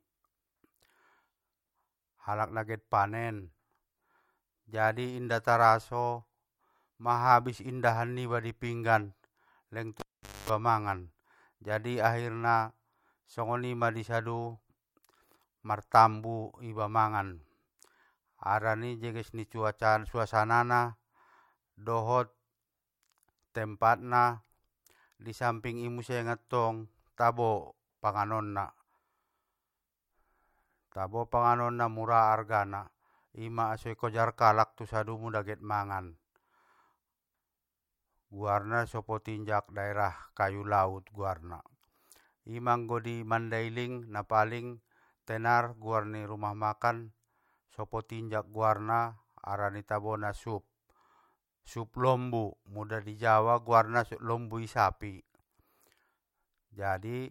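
At 10.00 s a pop marks a cable pulled and plugged in. About 0.45 s of near silence follows, with 0.24 s of 50 Hz mains buzz as the plug tip touches, then a second pop at 10.50 s. A spectrogram shows two broadband spikes around stacked 50 Hz harmonics.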